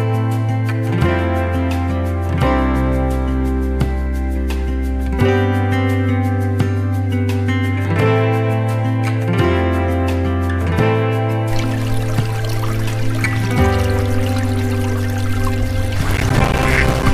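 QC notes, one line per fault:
16.10–17.03 s, processor overload crackle: the processor kept missing its buffer deadlines, dozens of times in a row, with gaps that fit buffers of around 5 ms. Each miss leaves a hard-edged silent gap, so the sound breaks into gritty crackle until the load eases.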